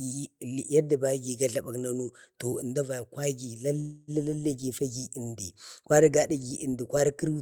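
From 3.79 to 4.11 s there's a call audio freeze: the last sound stretches into a fading buzz for about 0.28 s, likely a jitter buffer running dry, then speech resumes intact.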